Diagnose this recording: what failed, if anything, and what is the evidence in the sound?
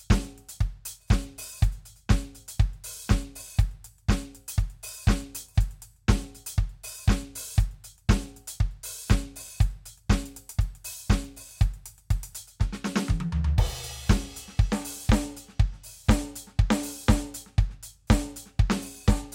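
Nothing failed: the music runs its full duration with no audible defect at any stage of the chain.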